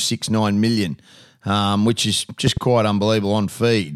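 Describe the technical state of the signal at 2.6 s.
At 2.6 s the signal is just coming out of a loud pop that runs from 2.47 to 2.59 s, right after "million um which is". Two sharp pops land in quick succession, peaking roughly 10 dB above the speech. The speech carries on underneath them. The likely cause is a sudden voltage step or pulse, from a plug, switch, static or driver glitch, added to the signal and shaped by the circuits downstream.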